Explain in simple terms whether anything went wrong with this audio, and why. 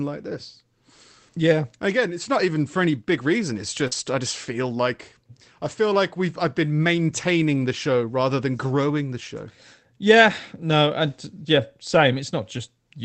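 Short concealed packet loss at 3.87 to 3.93 s, just before "I just feel like": about 40 ms of the call arrived too late, so the receiver stretched the preceding sound to cover the gap, leaving a brief smear or wobble.

Lost packet rebuilt from error correction at 3.91 to 3.93 s: one 20 ms piece was lost, but the next packet carried a rough backup copy, so it plays grainier rather than silent.

The audio passed through a call codec that keeps sound only up to 8 kHz.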